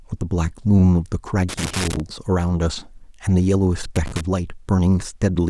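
Around 1.49 s the speech breaks into loose connector crackle for about half a second, to 2.00 s, then again from 3.96 to 4.21 s. A worn contact is making and breaking, chopping the signal into irregular scratchy bursts.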